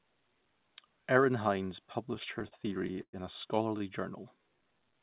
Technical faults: repeated stalls (stutter); short stall from a late packet; jitter buffer slow-down

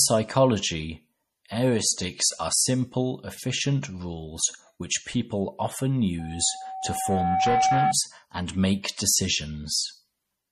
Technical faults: MP3 compression; loudspeaker feedback squeal

